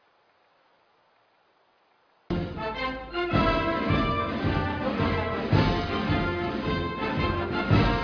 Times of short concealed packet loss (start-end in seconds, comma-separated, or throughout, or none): none